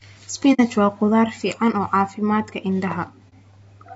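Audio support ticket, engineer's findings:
Grainy, rough speech throughout; noise between harmonics, lowered or synthetic top band. Likely low-delay AAC compression (AAC-ELD, about 32 kbps); short frames smear pitch harmonics. Grain, not dull lowpass.

Soft-edged dropouts, 0.53–0.60 s and 3.29–3.34 s: AAC frame loss with muting. Decoder zeroes lost frames; window overlap fades edges, unlike hard gaps.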